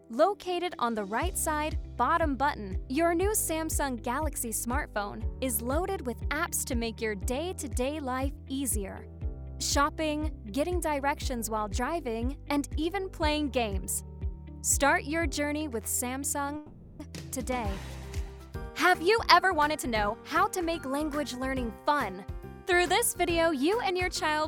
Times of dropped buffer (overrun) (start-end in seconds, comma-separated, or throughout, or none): none